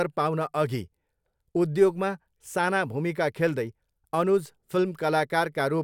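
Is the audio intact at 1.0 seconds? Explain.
Yes, the speech at 1.0 seconds is intact, with no dropout, click, distortion or other fault at that moment.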